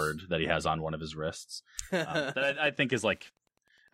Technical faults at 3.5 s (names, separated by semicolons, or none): Wi-Fi interference